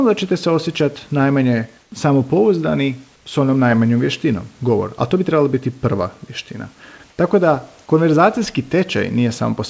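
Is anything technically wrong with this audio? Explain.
Yes. Comfort noise in place of the background appears at 1.82–1.92 s, 3.16–3.26 s and 7.10–7.18 s. The room background turns to steady, featureless hiss, about 4, 3 and 1 dB quieter, likely from discontinuous transmission filling pauses with synthetic noise.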